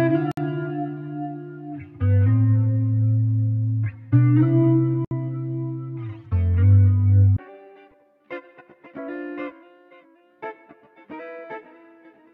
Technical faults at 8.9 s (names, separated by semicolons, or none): none